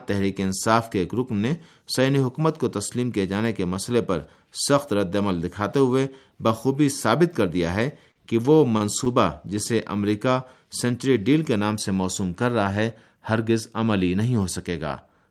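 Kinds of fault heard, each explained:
Repeated stalls (stutter): between 8.11 and 9.09 s the speech halts five times as late packets empty the jitter buffer. Each gap is bridged by stretching the last sound, 106 ms in all, the longest 42 ms. Unlike packet-loss dropouts, nothing is skipped; the speech only drags.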